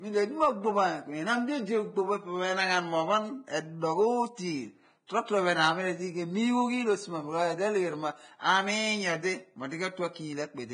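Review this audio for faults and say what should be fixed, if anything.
Compression damage throughout, likely Vorbis compression at around 22 kbps: nothing above 9.7 kHz, and coarsely quantised treble turns fine detail into hissy, grainy noise. To prevent it, keep a lossless master and encode the speech at a substantially higher bitrate or quality setting.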